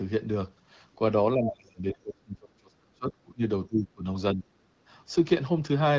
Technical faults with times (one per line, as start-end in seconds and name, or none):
1.35-3.42 speech suppressed in double talk
3.67-4.06 speech suppressed in double talk
4.33-4.47 speech suppressed in double talk